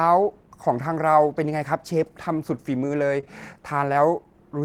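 At 3.20 to 3.24 s the speech has a short stall from a late packet. The packet arrived late and the jitter buffer ran dry. The receiver stretched the last sound by 22 ms, then resumed where it stopped. Nothing is lost. The sound holds briefly, with a faint buzz or dip.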